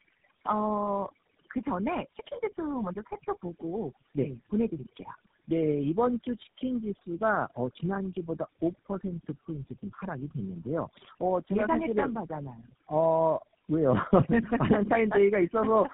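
From start to finish, the background drops away between phrases, dotted with twinkling specks, while the speech itself has its softer edges and trailing sounds dissolving away. This is overdone noise removal: the reduction was set far too aggressively, so any frequency band that came close to its noise estimate was pushed down or shut off, taking the quieter parts of the speech along with the hiss.

Throughout, the speech is also rough, muffled and warbly, with nothing audible above about 3.7 kHz. That combination points to tandem speech coding, where the signal was decoded and re-encoded at each network boundary, here through about three low-rate speech coders in a row, finishing with something like GSM full rate. Each coder had to work on the already damaged output of the one before, so the artefacts stacked up into this harsher, duller, more unstable sound.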